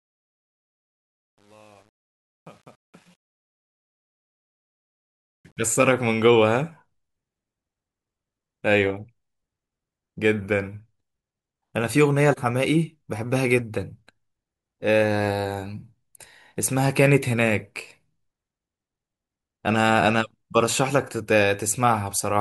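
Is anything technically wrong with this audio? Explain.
Yes. The opening fade-in has truncation distortion on a fade, from the start to 5.63 s. But the gain stage kept too few bits and added no dither. The graininess points to roughly 9-bit resolution. At low gain the waveform collapses into a few coarse square steps. The worst stretch runs from 0.0 to 4.61 s. There the speech sounds gritty.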